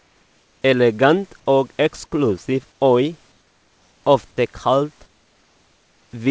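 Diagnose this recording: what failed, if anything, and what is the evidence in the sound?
Comfort noise in place of the background, from call processing. At 0.00–0.62 s, 2.72–2.81 s after "og eksklusiv", 3.32–4.04 s and 5.06–6.11 s, the room tone turns flat, featureless and about 4 dB quieter. Likely discontinuous transmission: the sender paused, and the receiver synthesised noise.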